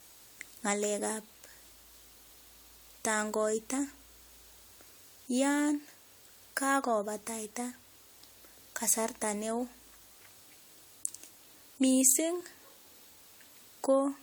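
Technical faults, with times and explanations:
Throughout, generation loss: swirly, hollow, smeared speech with blurred attacks, likely from about five rounds of AAC re-encoding, each stacking fresh quantisation noise.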